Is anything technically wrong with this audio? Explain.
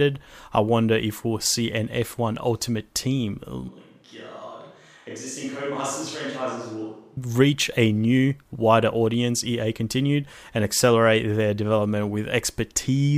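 Yes. From 3.69 to 7.17 s, just before "reach a new wider", the speech turns hollow and roomy, with thinner bass and a level drop of about 10 dB. This is likely a switch to a distant microphone. The waveform shrinks abruptly, and the spectrogram shows weakened lows plus a faint noise floor roughly 40 dB below the speech.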